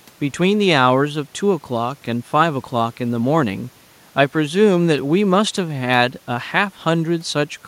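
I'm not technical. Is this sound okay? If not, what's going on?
Yes, nothing stood out as a problem when listening to this recording.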